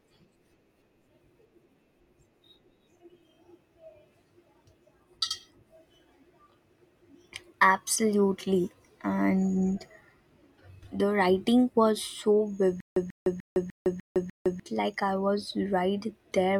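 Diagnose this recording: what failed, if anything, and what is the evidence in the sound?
Playback or stream buffering is where this one went wrong. From 12.80 to 14.60 s there's a stutter with silent gaps: a burst of about 139 ms of speech plays, then roughly 159 ms of dead digital silence, and the same burst comes back every 299 ms or so, six times over. That's likely a stalled player retrying, replaying its last fragment each time and then running dry, so the speech that belonged in that window never makes it out.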